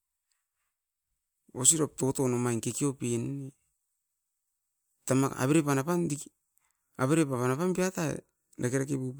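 A speech recording with no audible technical faults.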